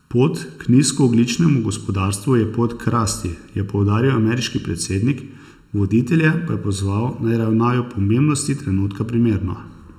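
Channel delay with comb filtering runs throughout the speech: one channel trails the other by under a millisecond, so mono summing cancels evenly spaced frequencies from around 700 Hz upward. The hollow, phasey tone stays fixed, unlike flanging, whose notches sweep.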